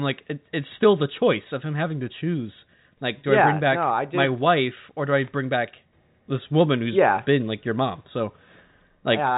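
No technical faults are audible in this recording.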